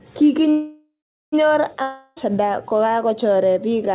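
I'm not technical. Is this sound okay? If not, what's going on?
No. There's a call audio freeze from 0.5 to 1.34 s: the sound stalls, the last bit stretches into a fading buzz, then about 0.4 s of silence. The likely cause is delayed data leaving the receiver nothing to play. Speech then resumes where it stopped, with nothing lost.

There's also a long network dropout from 1.82 to 2.18 s: a fading buzz covers the gap, and about 0.34 s of speech is skipped, likely because that audio never arrived.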